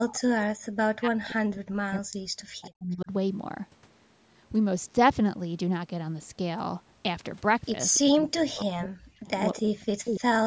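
Speech suppressed in double talk, from 0.0 to 0.38 s and again from 0.65 to 3.11 s: the speech sinks sharply, at its deepest by something like 40 dB, for most of those spans. The likely cause is an echo canceller that heard the far side talking at the same moment, could not tell this talker apart from its own loudspeaker echo, and turned everything down.

Echo leak, at 7.94 to 7.99 s: a brief, faint copy of the speech arrives 287 ms behind the original, sitting roughly 20 dB below it. The delay points to a loudspeaker on the far end whose canceller let a scrap of the picked-up signal slip back down the line.

Speech suppressed in double talk returns from 8.02 to 9.3 s and from 9.54 to 10.27 s, with the same deep dips, again around 40 dB, while both sides overlap. Throughout, the band tops out at 8 kHz, consistent with the call's own microphone path.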